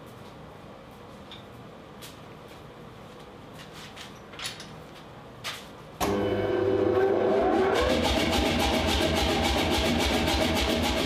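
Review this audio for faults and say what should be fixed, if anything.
Nothing needs fixing, as the signal holds steady throughout with no dropouts, clipping, glitches or other technical faults to be heard.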